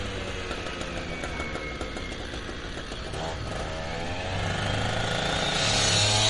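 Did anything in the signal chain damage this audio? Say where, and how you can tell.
Yes. MP3 compression damage runs through the whole clip, from start to finish, and the codec stage is the likely place it happened. Nothing in the sound reaches above 11.2 kHz, a fixed treble cut-off the encoder imposes when bits run short. The compression damage is plainly audible throughout, which points to a low bitrate of around 45 kbps. At that rate, the encoder discards the top band and zeroes out weaker frequency detail to stay within its budget.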